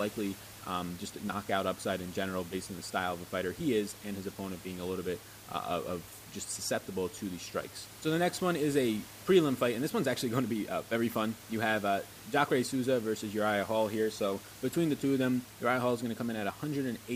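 The speech signal shows no technical faults, with the room's own background sound sitting about 18 dB below the speech as part of the recording.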